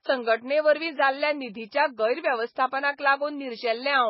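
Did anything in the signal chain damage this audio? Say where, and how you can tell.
Yes. Throughout the speech the treble stops dead at about 5.6 kHz, and what remains has a watery, swirling quality, with sibilants turning into metallic chirps and consonant onsets smeared. This is likely MP3 compression at the codec stage, heavily starved of bits, which fits a bitrate around 16 kbps. The encoder discards the top band and zeroes weak spectral lines that flicker on and off frame to frame. A simple low-pass filter or resampling would cut the top cleanly, without this swirl.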